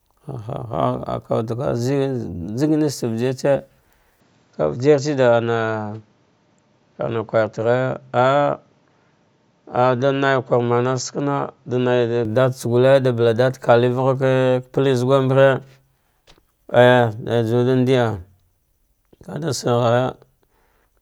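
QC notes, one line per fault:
4.20 to 12.25 s, input switched to a poorer device: the speech suddenly loses its top end, with nothing above about 7.6 kHz, so it goes dull and a bit boxy, then opens back up at 12.25 s. There's no gap at either switch and the level stays about the same, but a faint new noise floor sits well under the speech in that stretch. That's likely the recording jumping to a narrower-band mic and back.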